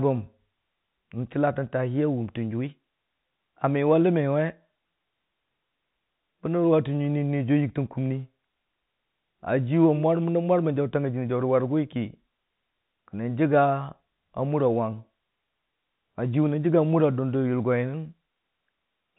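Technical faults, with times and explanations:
No technical faults are heard in this speech clip, which comes through the G.711 telephone path with nothing above about 3.9 kHz.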